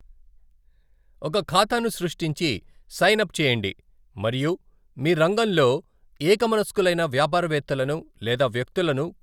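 No technical faults are audible.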